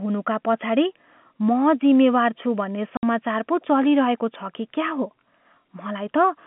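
At 2.97 s the speech drops out completely for 60 ms, until 3.03 s. That's packet loss filled with silence: the receiver had nothing to play and left a gap, which fits two 30 ms packets going missing. Its edges are abrupt, set against the narrow telephone-band G.711 line.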